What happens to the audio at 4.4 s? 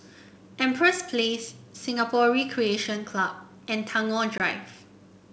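Packet loss on an ADPCM call strikes between 4.38 and 4.41 s: about 20 ms of speech drops out as a hard-edged silent hole, consistent with a single lost packet. Because the G.722 decoder's adaptive predictor and step size keep running without the missing data, they drift out of step with the sender's, so the speech comes back with some distortion before settling within some tens of milliseconds.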